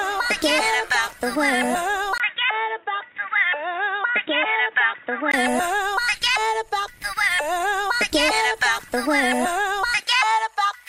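From 2.18 to 5.34 s the audio goes dull, with nothing above 3.8 kHz, a 20 ms gap and faint new hiss, likely an input switched to a poorer device.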